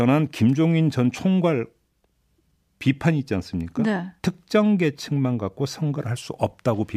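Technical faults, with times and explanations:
No technical faults found in the speech recording.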